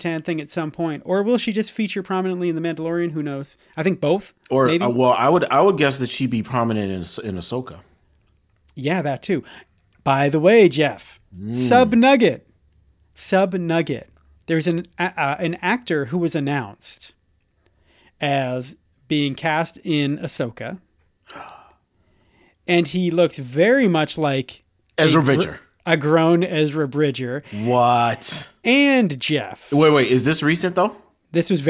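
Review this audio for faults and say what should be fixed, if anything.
Nothing to fix: no faults are audible anywhere in the speech, so no corrective work is needed.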